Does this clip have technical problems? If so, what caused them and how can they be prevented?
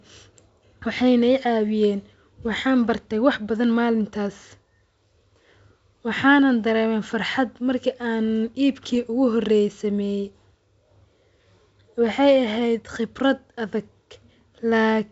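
Yes. At 8.95 s there is a short pop with a rough edge: bit errors on an ADPCM link, here a G.722 path at 64 kbit/s whose wideband sound is clear around the event. A flipped bit corrupts the decoder's step size and prediction, so the error rings briefly across what sounds like a few frames rather than staying a single click. This points to an error rate of roughly one or two bits per thousand. Adding error protection or a cleaner radio or line link would prevent it.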